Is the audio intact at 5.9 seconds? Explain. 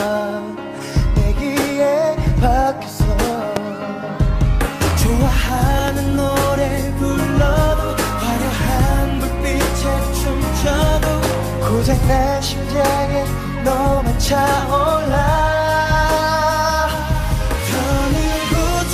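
No. A single loud pop runs from 5.88 to 5.91 s, standing roughly 15 dB above the surrounding level. It is likely a voltage pulse, such as a switch transient, shaped into a thump. Unlike a dropout, the sound carries on underneath.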